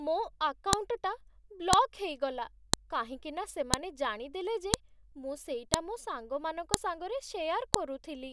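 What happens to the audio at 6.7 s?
A sharp, loud click cuts through the speech at 6.74 s. This is a file header played as audio: the clip was assembled from WAV pieces about 1 s long, and the few dozen header bytes at the start of one piece were read as sound samples. On a waveform it is a narrow, sharp spike unrelated to the surrounding speech. On a spectrogram it shows as a thin vertical line spanning the whole frequency range.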